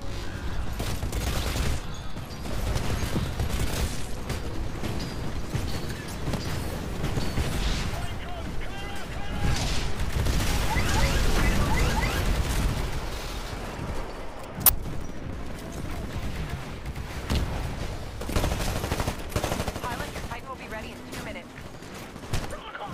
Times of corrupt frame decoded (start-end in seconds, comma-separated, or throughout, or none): 14.66-14.69